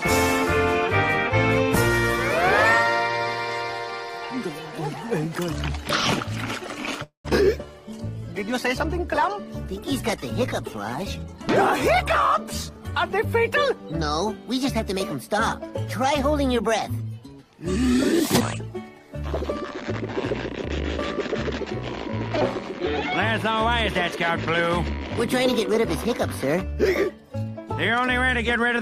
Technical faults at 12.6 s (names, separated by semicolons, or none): call bitrate drop; jitter buffer speed-up